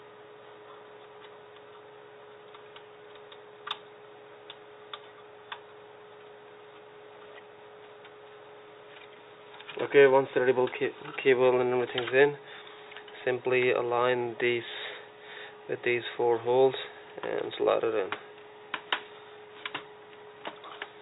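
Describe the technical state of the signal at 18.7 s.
At 18.7 s the signal is intact, with no audible technical fault at that moment.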